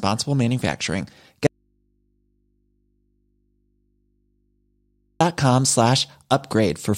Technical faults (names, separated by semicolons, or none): audio dropout to a faint residue